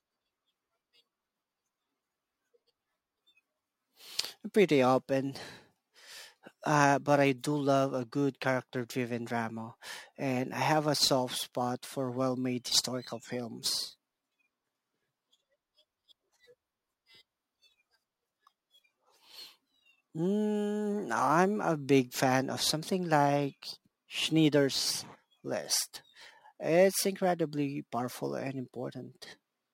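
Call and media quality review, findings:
Crude rate conversion, throughout the speech. Gritty inharmonic fizz tracking loud and bright syllables, roughly 25 dB under the signal. Fits a 44.1 to 48 kHz conversion by nearest-sample repetition, unfiltered. Spectrogram: faint non-harmonic lines and haze between the voice harmonics.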